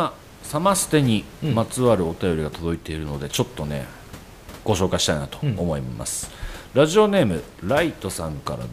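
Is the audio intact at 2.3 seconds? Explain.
Yes, the audio is intact at 2.3 seconds, with the speech carried cleanly over the room's own background noise, which sits about 21 dB below it.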